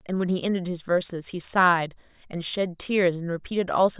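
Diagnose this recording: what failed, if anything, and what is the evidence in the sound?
Nothing failed; no fault is audible in the speech.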